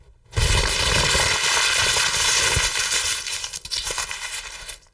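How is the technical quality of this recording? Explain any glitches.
No glitches or technical faults can be heard anywhere in the recording.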